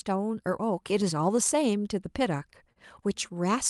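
From the start and recurring to the end, the speech has small timing hiccups at uneven intervals. This is clock drift between sender and receiver: the sender's clock runs roughly 2 percent slow, so the jitter buffer keeps draining and the receiver repeatedly patches in brief pieces. Unlike a single network glitch, these stumbles never settle.

From 2.72 to 2.78 s there is a short stall from a late packet. The buffer ran dry, and the receiver stretched the last sound by 34 ms, holding it with a slight buzz or dip until the data arrived. Unlike a dropout, nothing goes missing. The speech simply resumes from where it paused, through a call codec whose top end stops near 12 kHz.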